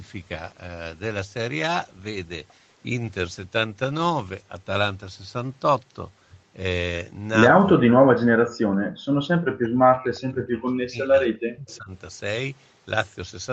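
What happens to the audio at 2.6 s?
Nothing goes wrong at 2.6 s: the speech carries on intact through the call path, with the band ending at about 8 kHz as the call codec normally leaves it.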